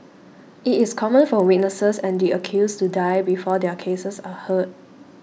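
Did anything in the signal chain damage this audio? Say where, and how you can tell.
Yes, at the sample-rate conversion stage: a resampler restarted on every block. Throughout the speech, a 20 Hz buzz rides under the signal and drops out in pauses, which points to independent 50 ms blocks, each resampled without its neighbours' samples and leaving an edge error.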